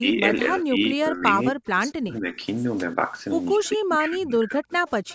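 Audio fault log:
0.0–1.32 s, 1.5–2.37 s, 3.57–4.73 s: speech suppressed in double talk. The speech dips by up to about 15, 40 and 25 dB, almost vanishing in the middle stretch, likely an echo canceller clamping down while both sides talk.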